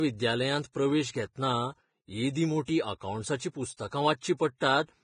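Throughout the speech the sound is hissy and grainy, with roughened tones and nothing above about 9.7 kHz. This is likely heavy Vorbis compression, at a rate that fits roughly 22 kbps, where the treble is quantised so coarsely that its detail turns into noise.

From 0.72 to 0.75 s, a brief hiss of about 24 ms runs just ahead of an attack, which then sounds soft and smeared. This is pre-echo: the codec spread noise meant for the loud onset across its whole block, filling the quiet moment before it.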